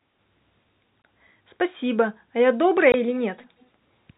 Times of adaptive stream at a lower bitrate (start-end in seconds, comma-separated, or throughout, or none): none